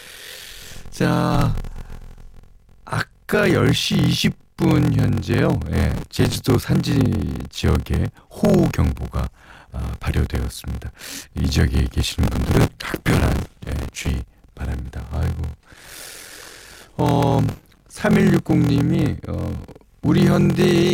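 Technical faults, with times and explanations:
Throughout, block size mismatch (padded): the speech carries a steady buzz at 43.1 Hz and runs slow at 0.861 times normal speed with its timbre unchanged. Each 1024-sample block read is only partly filled, which fits blocks of about 882 samples, and the zero-padded remainder leaves a gap every block.
5.91–6.35 s, 12.26–14.07 s and 17.49–17.96 s, processor overload crackle: gritty tearing rides on the speech, longest in the middle burst. Buffers of a few milliseconds miss their deadlines in a row, and each miss replays old audio with hard edges, so the clicks merge into crackle.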